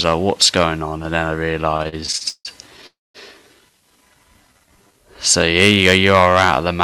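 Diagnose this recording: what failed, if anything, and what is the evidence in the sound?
Repeated stalls (stutter) occur between 1.71 and 2.85 s. The audio halts 11 times, with about 352 ms filled in and the longest hold at 162 ms. Nothing is lost, but it drags. Network packets arrived late and the jitter buffer repeatedly ran dry.

A call audio freeze follows from 2.86 to 3.17 s. The last sound is held, then fades into 200 ms of silence, about 279 ms in all. The audio resumes where it stopped, now 279 ms later. The likely cause is packets held up on the network.

A jitter buffer slow-down runs from 4.41 to 5.06 s. The audio plays at 87% speed with unchanged pitch, stretched by 90 ms. Sounds are drawn out. The receiver repeated single pitch periods or bits of pauses to rebuild its reserve.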